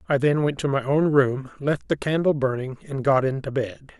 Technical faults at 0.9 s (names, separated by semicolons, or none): none